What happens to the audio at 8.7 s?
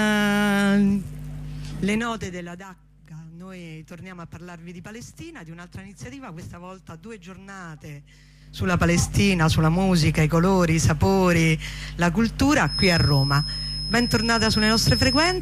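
A level change is applied in unsmoothed 3 dB jumps rather than a continuous ramp, producing zipper noise from 8.38 to 8.77 s. Around fifteen abrupt steps a second, moving the level by roughly 20 dB, each leave a small click, heard as a rapid ticking riding on the sound.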